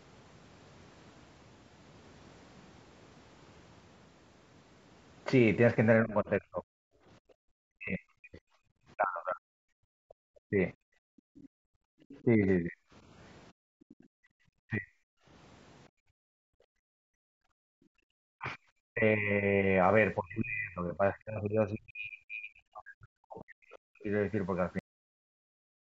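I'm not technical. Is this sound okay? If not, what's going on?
No. There are four problems.

Speech suppressed in double talk: The talker's voice dips, dulls or breaks into pieces from 6.03 to 10.59 s, 12.24 to 12.79 s, 14.65 to 14.92 s and 18.39 to 24.08 s. The likely cause is the other side talking at the same moment. The call software's echo control then turned everything down.

Background gated by the echo canceller: The room sound drops away and then comes back, from 6.92 to 7.45 s, 9.77 to 11.96 s and 13.52 to 18.11 s. The echo control clamped the microphone hard while the loudspeaker was playing. It let go afterwards.

Other side's voice leaking through: From 10.09 to 12.24 s a faint second voice sits well under the talker. It is likely the far end coming out of the loudspeaker and back into the microphone. The echo control did not fully remove it.

Cut-off end: At 24.79 s the audio stops dead in the middle of a sound. 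It falls straight to silence with no fade. The last part of the recording was never saved.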